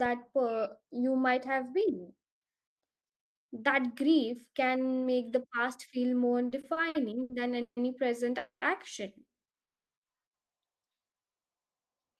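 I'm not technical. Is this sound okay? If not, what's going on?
No, there are a few problems, all typical of an internet call.

From 6.49 to 7.79 s, just after "the past feel more", there are repeated stalls (stutter). The speech pauses six times, each time for 150 ms or less, and the last sound is held over the gaps. Nothing is lost, but the speech drags and jerks.

At 8.39 to 8.64 s and 9.64 to 9.93 s, there are two call audio freezes. The speech stops. In the first, the last sound fades out to silence; in the second, it just goes silent. Then it carries on where it left off. The likely cause is data arriving late on the network.

From 10.93 to 11.48 s, a jitter buffer slow-down stretches the speech. It plays at about 86% speed. The pitch does not change. Tiny pieces of sound are repeated to buy time, so words sound drawn out.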